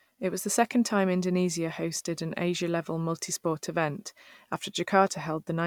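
Listening to the speech recording, nothing technical stood out as wrong at any point.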